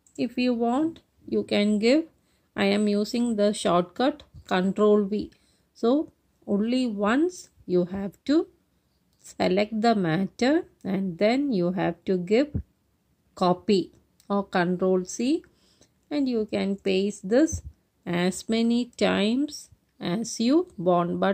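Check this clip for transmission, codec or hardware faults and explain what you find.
No transmission, codec or hardware faults turn up anywhere in the clip. Nothing in the audio points to a problem in how it was carried, encoded or captured.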